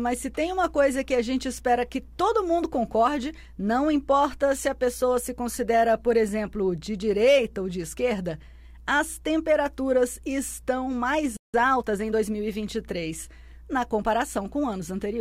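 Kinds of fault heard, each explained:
Playback stall: The sound cuts out mid-flow at 11.37 s and stays silent for about 170 ms before resuming, likely because the player ran dry of data or its thread was held up. Unlike a dropout, the sound simply pauses.
Time-compressed catch-up: From 11.54 to 12.20 s the player works off the backlog left by the stall by trimming and cross-fading small slices, so the audio runs about 1.25 times faster. The pitch stays put, which rules out a simple speed-up.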